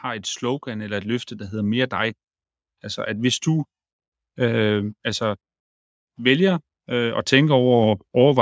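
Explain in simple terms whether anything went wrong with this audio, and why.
Yes, automatic gain rising: from 0.05 to 2.21 s and 6.16 to 8.37 s, the call's level control slowly turned up, swelling voice and background together.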